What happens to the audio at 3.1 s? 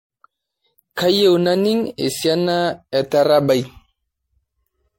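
At 3.1 s the speech shows generation loss, present across the whole clip: it was likely decoded and re-encoded as MP3 about ten times at a low bitrate, each pass adding fresh quantisation. It sounds swirly, hollow and smeared, attacks blur, and nothing remains above 16.5 kHz.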